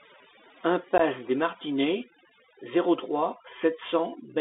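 Throughout the recording, overdone noise removal is at work: a noise reducer set far too aggressively shuts off frequency bands that sit near its noise estimate, taking the quieter parts of the speech with them. The background drops and breaks up into twinkling specks.

Also present from start to finish is the Bluetooth CVSD headset codec. This one-bit, adaptive-step coder, whose sound fits a 64 kbps link, confines the speech to roughly 250 Hz to 3.7 kHz. The damage is plainly audible: loud high content overruns the step size and distorts, s sounds turn scratchy, and a granular hiss runs beneath the speech.

From 0.98 to 1.00 s there is unconcealed Bluetooth headset packet loss. A couple of short voice packets between headset and phone failed to arrive and were replaced by nothing, leaving about 15 ms of abrupt hole. The speech cuts out with hard, click-prone edges and returns briefly quieter.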